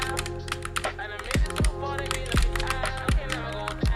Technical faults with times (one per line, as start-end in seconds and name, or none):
0.00-3.96 resampler restarted on every block